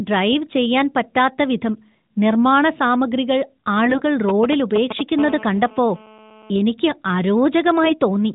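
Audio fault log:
3.86–4.01 s, AMR bit errors: For about 0.15 s the speech keeps its rough pitch and loudness but turns hoarse and gargly. Flipped bits in the weakly protected parts of the AMR frames misplace the excitation pulses and skew fine pitch, gain and spectral values. The damage spans about seven 20 ms frames and points to an error rate of several percent. A spectrogram shows smeared, noisy harmonics and blotchy formants; the waveform looks ragged but stays at its usual level.
4.29–5.01 s, GSM signalling bursts: A galloping dit-dit-dit of short buzzes sits only a few dB below the speech. A nearby 2G phone sending signalling bursts at 216.7 Hz is being rectified by the audio circuit, so each group of radio bursts becomes a short buzz. On a spectrogram this appears as short vertical stacks of harmonics at multiples of about 217 Hz. The waveform shows clusters of sharp spikes separated by gaps.
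5.19–6.51 s, GSM phone buzz: A hard, raspy buzz at 216.7 Hz, about 18 dB below the speech, runs steadily for 1.3 s with no relation to what is said. A nearby 2G phone in a call transmits 217 times a second, and the audio circuit rectifies each burst into a pulse. A spectrogram shows an unbroken comb of horizontal lines spaced 217 Hz apart, and the waveform shows a regular pulse train under the speech.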